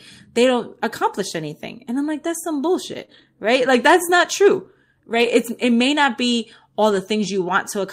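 Right after "i'm like that's some", around 3.01 to 3.03 s, there's a lost packet rebuilt from error correction. The packet didn't arrive, but the next one carried a low-bitrate spare copy, so the decoder played that instead of leaving a hole. You don't get a gap, just a 20 ms stretch that sounds a bit rougher and grainier than the audio around it.

Then from about 3.05 to 3.10 s comes a short concealed packet loss, where roughly 20 ms never made it at all. With no copy to fall back on, the receiver stretched the last bit of sound forward, continuing its pitch or filling with shaped noise, and spread that over about 23 ms before fading back into real audio. It comes across as a brief smear or wobble.

Straight after that, from about 3.10 to 3.24 s and leading into "right like that's not", it's error-correction rebuilding again. This time it's a longer run, about 80 ms of rebuilt audio, which fits four lost packets recovered from their low-bitrate backups. 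That rough, noisy texture hangs on longer here.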